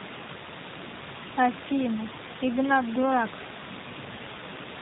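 Speech, and the whole thing has been through a G.729 codec, with damage you can plainly hear from start to finish. Everything above 4 kHz is gone, so it's boxy and dull, and the voice has that slightly rough, synthetic edge you get when a codec models the throat and pitch and fills in the rest with a few pulses per frame. That fits the 8 kbit/s G.729A flavour. The room noise, about 11 dB under the speech, gets a bit of a warble from it too.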